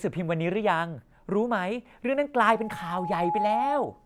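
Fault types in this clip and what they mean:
Loudspeaker feedback squeal: the microphone re-amplifies its own loudspeaker until an 840 Hz tone runs away. It starts at 2.41 s, swells over about a second to roughly the level of the speech, and persists to the end. On a spectrogram it is a bright horizontal line at 840 Hz, and on the waveform it shows as a growing sinusoidal envelope.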